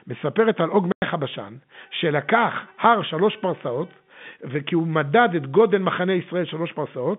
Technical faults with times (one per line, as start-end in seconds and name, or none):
0.92-1.02 packet loss filled with silence